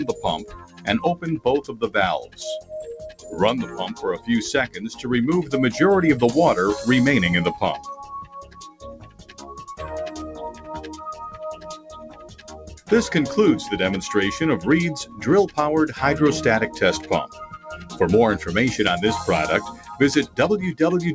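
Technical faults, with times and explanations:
Throughout: noise suppressor applied to music or sounds. A suppressor tuned for speech stays engaged and treats sustained tones, ambience and tails as noise. The level swings by about 10 dB, so the sound pumps and thins. On a waveform the envelope visibly breathes. On the spectrogram, which is empty above 8 kHz as the G.722 call path leaves it, sustains fade between intact attacks.
0.09–5.53 s, 7.78–9.64 s, 10.52–10.68 s, 11.56–12.91 s, 15.05–15.57 s, 17.27–17.96 s and 19.72–20.38 s: sound cut by the noise suppressor. Steady and decaying material is pushed down by up to about 15 dB in the first two spans and about 7 dB in the shortest, so decays are cut short. This shows as sudden waveform dips and darkened spectrogram stretches.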